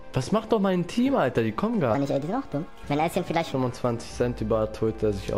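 From 1.95 to 3.52 s a section at the wrong speed plays 1.39 times too fast, lifting pitch about five semitones, likely from a clock mismatch. Unlike a pitch shift, timing hurries too, so the sound turns high and rushed together.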